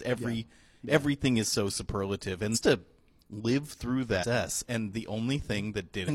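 Damaged data in a compressed stream occurs at 2.51–2.59 s after "everything is so superlative", at 4.18–4.25 s after "to live through", and at 6.04–6.10 s. Corrupt frames knock the decoder out of sync, giving a brief chirp, squawk, click or short hole while it searches for the next frame header.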